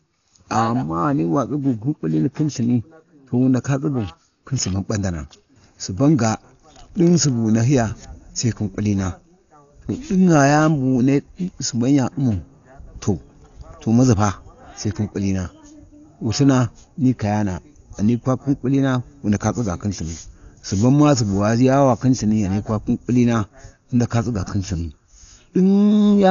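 Speech running dull throughout, with nothing above 6.9 kHz and rough, fluttering noise around tones, heavy damage likely from low-bitrate Dolby Digital compression, fitting about 48 kbps, unlike a clean low-pass.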